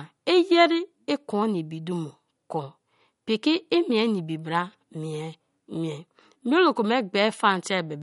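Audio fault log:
throughout, MP3 compression: the speech has likely been squeezed through an MP3 encoder starved of bits, a sound that fits a low rate near 48 kbps. Short of bits, the encoder has sliced off the treble, leaving nothing above 11.2 kHz, and drops quieter frequency components that then flicker in and out from frame to frame. That flicker gives the voice a plainly audible watery, swirling texture, and the missing top end makes it sound dull.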